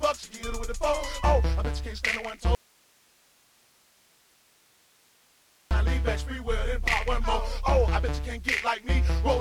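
At 2.55 s the sound cuts out abruptly in an audio dropout to a faint residue. For about 3.2 s only hiss remains, roughly 35 dB down. Sound returns sharply at 5.71 s. The likely cause is a lost feed into a path that stayed live.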